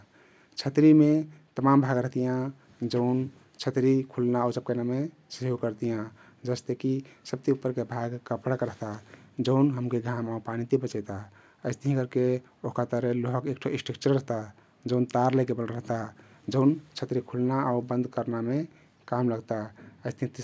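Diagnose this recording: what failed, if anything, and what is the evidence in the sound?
Nothing in the recording points to a failure anywhere in the chain. The speech has no audible event that would place a problem at any stage between capture and playback.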